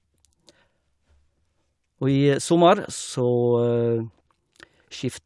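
No technical faults can be heard anywhere in the recording.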